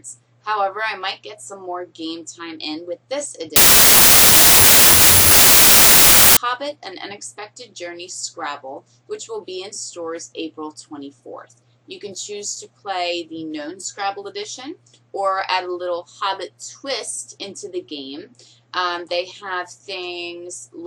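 From 3.56 s to 6.37 s the audio turns into loud, harsh noise. The real signal is still faintly audible underneath, slowed to 0.75 times speed and lowered in pitch to match. This is a wrong sample width fault. The data are being read with a different number of bytes per sample than they were written with. The 0.75 ratio fits 32-bit samples read as packed 24-bit. Most values mix bytes from neighbouring samples, and only some keep the signal's top bits.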